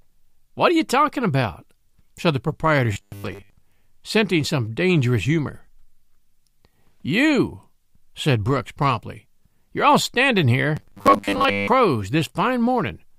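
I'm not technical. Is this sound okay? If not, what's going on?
No. Twice, from 2.93 to 3.54 s and again from 10.77 to 11.68 s, new audio likely stopped arriving in time, so the playback software kept repeating the last tiny slice, about 10 ms long, to fill the gap. This is robotic sound from repeated short buffers. Most of the real speech in those moments gets skipped, and the constant looping stamps a fixed 100 Hz buzz onto it, so the voice turns flat and metallic.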